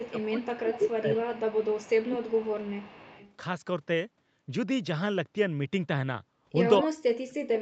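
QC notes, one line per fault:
0.00–0.47, 0.67–0.96, 1.13–2.72 and 2.92–3.34 s, echo leak: a faint delayed copy of the speech trails it by a steady 221 ms, about 25 dB down and about 15 dB down at 0.67–0.96 s. This is likely an incomplete echo cancellation on a speakerphone. The fixed delay separates it from room reverb's smooth tail.
0.02–1.55, 2.02–2.92 and 6.82–7.61 s, speech suppressed in double talk: the speech ducks by about 20 dB, and by about 40 dB in the final stretch, likely because the echo canceller clamped down while both sides talked.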